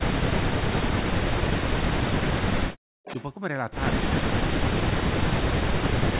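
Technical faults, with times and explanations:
0.28–2.43 s, 4.16–5.39 s and 5.8–6.08 s, speech suppressed in double talk: the voice repeatedly sinks, thins or breaks into fragments, falling by as much as about 40 dB. Across these stretches it adds up to roughly a second and a half, then about half a second, then about a third of a second. The likely cause is the far side talking at the same moment: unable to tell local speech from loudspeaker echo, the canceller attenuated everything together.
2.77–3.04 s, background gated by the echo canceller: the room sound drops out abruptly by about 40 dB for roughly 0.3 s, then snaps back. While the loudspeaker played, the canceller clamped the microphone hard, so the ambience vanished with it.
3.04–3.26 s, echo leak: right after the gate releases, a delayed copy of the voice trails about 0.35 s behind the original, sitting roughly 10 dB below the speech. 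It likely comes from a loudspeaker on one end whose canceller failed to strip all the playback its microphone picked up, so the remainder was sent back. Within the narrow telephone band that stops at 4 kHz, the leaked copy is brief.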